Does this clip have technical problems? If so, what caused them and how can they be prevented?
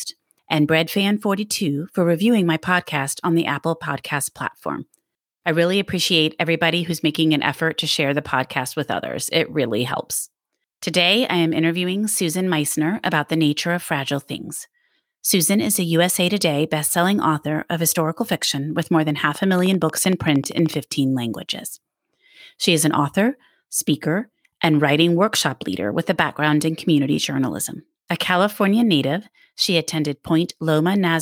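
Yes. From 19.35 to 20.75 s, a steady ticking sits over the speech. It is a train of clicks, some twenty evenly spaced pulses at 13 per second, peaking about 5 dB above the speech. The likely cause is interference from nearby equipment or a faulty connection or power supply. Shielded cables, distance from noisy devices and a stable interface prevent it.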